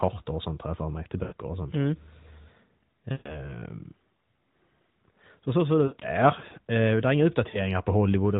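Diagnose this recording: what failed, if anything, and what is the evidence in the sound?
Four times the speech smears, stretches and sinks toward silence before recovering a little rough: at 1.24 to 1.34 s, 3.12 to 3.55 s, 5.86 to 6.06 s and 7.50 to 7.70 s. These are lost AMR speech frames, a network-stage fault in the radio link. Corrupted frames were discarded, and the narrowband decoder, whose band stops at 4 kHz, extrapolated from the last good pitch and spectral shape with falling gain. The concealed stretches total about 80, 140, 100 (scattered, longest run 60 ms) and 40 ms.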